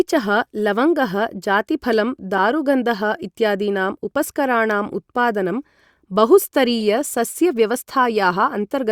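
A sharp chirp cuts into the speech at 2.38 s, right after "लवङ्गः जातिफलं", and a softer blip follows at 6.80 s. Both are a corrupt frame decoded: flipped bits in a single compressed frame sent energy to wrong frequencies, the first burst far louder.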